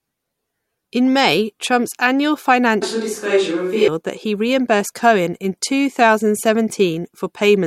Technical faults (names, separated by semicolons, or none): switch to a distant microphone